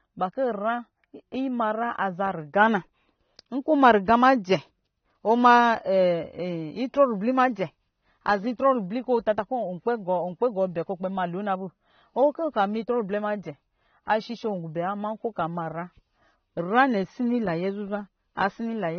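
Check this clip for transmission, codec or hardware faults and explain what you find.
One fault runs through the whole speech clip. The codec damage is plainly audible, with nothing above 6.3 kHz. This is likely AAC compression, AAC-LC at a low bitrate (the sound fits about 24 kbps). To save bits, the encoder quantises spectral lines coarsely and drops the top band. On a spectrogram, energy stops at a flat ceiling near 6.3 kHz for the entire length.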